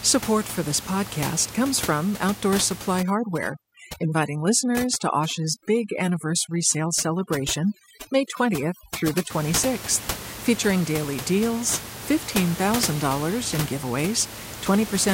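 From 3.03 to 9.30 s, overdone noise removal clamps bands near the estimated noise floor, so the room noise, about 11 dB below the speech, drops and breaks up into twinkling specks. A spectrogram shows scattered isolated dots between syllables.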